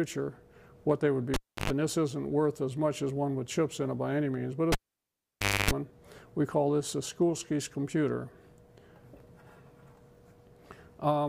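Twice the audio suffers a cable pulled and plugged in, at 1.34 to 1.70 s and 4.72 to 5.71 s. Each has a pop, a gap of 0.32 s then 0.94 s, and 50 Hz mains buzz lasting 0.11 s then 0.27 s, which a plain dropout lacks.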